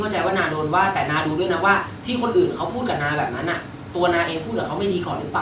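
Nothing goes wrong here, just speech coming down a call line with the top end rolled off at 4 kHz, which fits a G.711 A-law link doing its ordinary job.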